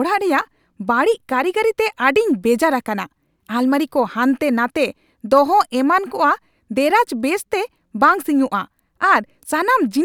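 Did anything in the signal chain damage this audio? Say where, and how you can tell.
No, nothing in the signal chain has damaged this speech recording. No stage between capture and playback has left a mark that can be heard.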